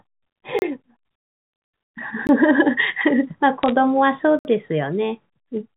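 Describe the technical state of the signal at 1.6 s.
At 1.6 s the speech is intact, carried through G.711 telephone coding with its narrow telephone band and no audible fault.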